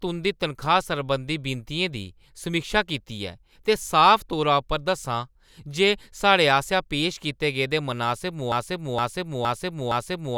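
At 8.52 s the speech falls into a broken-record loop: a 0.47 s fragment plays four times back to back and runs right to the end. The player or stream likely stalled and kept resending its last piece, so the audio meant for that stretch is lost.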